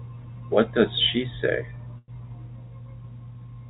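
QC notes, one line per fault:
1.98–2.15 s, call audio freeze: the speech stalls into a fading buzz for about 100 ms, then about 30 ms of silence, and resumes where it stopped with nothing lost. The likely cause is packets held up in transit, draining the jitter buffer, which stretched playback delay by about 100 ms. The narrowband call path, with nothing above 4 kHz, fits G.711.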